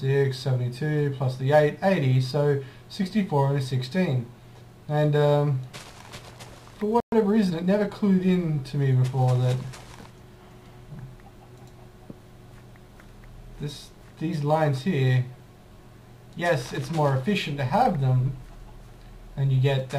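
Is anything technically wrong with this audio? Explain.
Yes, there are two related problems. At 7.00 s there's a playback stall: the sound cuts to silence for 120 ms, until 7.12 s, likely because the player ran dry of data or its thread got held up. Right after, from 7.12 to 7.92 s, you get time-compressed catch-up. The player trims and cross-fades tiny slices to clear its backlog, so the audio runs about 1.15 times fast at unchanged pitch.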